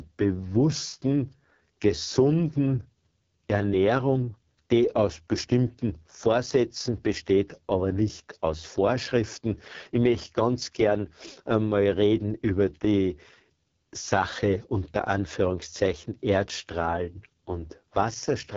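Rough, raspy speech with a dull top end stopping near 7.3 kHz throughout points to AMR wideband (HD Voice) coding at its lowest rate, around 6.6 kbit/s.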